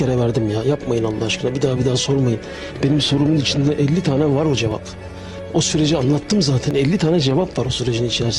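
An overlap between stream segments shows up at 4.71 s and again at 6.71 s, two seconds apart, matching the 2-second segment length. At each boundary the time stamps of adjacent segments claimed the same stretch, and the player trimmed that overlap from audio that was never actually duplicated. About 14 ms vanishes at the first point and 16 ms at the second, so the waveform jumps abruptly and a brief click or tiny skip is heard.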